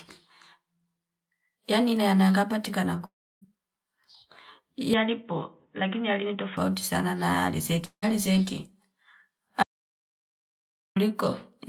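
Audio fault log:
3.05–3.43 s and 7.85–8.12 s, long network dropout: the sound smears into a fading buzz and then goes quiet, about 300 ms and 80 ms of near-silence, before resuming further on. This is likely a gap in arriving audio that was concealed, and unlike a dropout to silence, the concealment tail comes before the quiet.
4.94–6.57 s, input switched to a poorer device: the sound abruptly turns dull, with nothing above 3.8 kHz, a little quieter and with a new noise floor well below the signal, then clears again. There is no gap at either switch, so this is a change of tone rather than lost audio, likely from a narrower-band microphone or headset profile.
9.63–10.96 s, audio dropout to silence: the sound cuts out mid-flow for 1.33 s of silence, with no room tone and no fading buzz, and then returns. That hard, empty gap likely comes from lost input while silence kept being written, not from network concealment.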